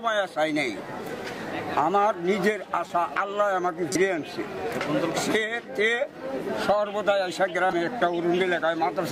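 A corrupt frame decoded at 2.87 to 2.90 s, 3.92 to 4.01 s and 7.66 to 7.76 s: damaged bits in a few compressed frames were decoded anyway, misplacing energy in frequency. The first is a quieter glitch near -30 dBFS; the later two are louder glitches near -10 dBFS.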